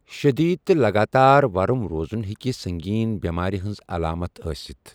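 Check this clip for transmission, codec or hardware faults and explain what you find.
A single sharp click at 2.14 s in this speech clip is the one fault, and it most likely comes from dropped samples: a handful of samples, well under a millisecond, vanish, so the waveform jumps abruptly between values. Nothing audible is lost, only that brief tick.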